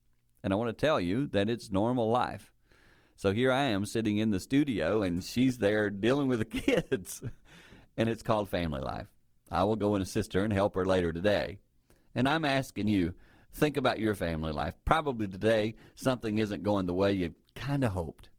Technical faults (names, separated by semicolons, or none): adaptive stream at a lower bitrate